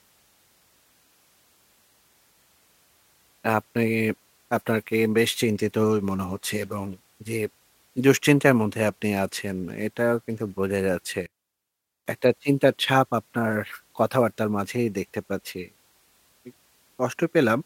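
From 11.26 s to 12.06 s the speech suddenly collapses to a faint trace about 21 dB quieter before returning at full level. The likely cause is one channel inverted: one stereo side flipped in polarity, so the shared centre cancels when summed to mono. On a waveform the envelope shrinks abruptly for that 0.8 s; a spectrogram shows the bands emptying across the range, leaving only faint residue.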